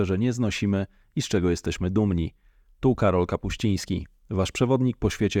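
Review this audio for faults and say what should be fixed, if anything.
No faults; nothing needs fixing.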